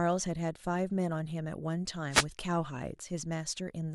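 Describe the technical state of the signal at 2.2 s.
A wireless microphone noise hit runs from about 2.11 to 2.25 s. The analogue FM radio link briefly fades as reflected signals cancel, so receiver noise surges, heard as a short burst of static swishing over the speech.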